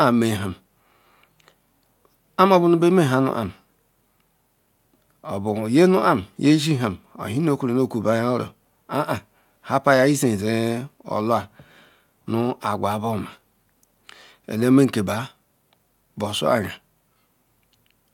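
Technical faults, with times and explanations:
No technical faults can be heard anywhere in the speech recording. There is no time in the audio that calls for a line.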